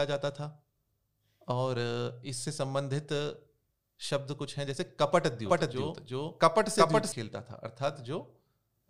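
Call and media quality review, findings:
Doubled audio track, 5.46–7.12 s. Speech heard twice, second copy trailing by roughly 400 ms at about equal level. Copy is full-band and dry, with no decay or room colour. Starts and stops abruptly. Likely a slower second capture path or misaligned edit.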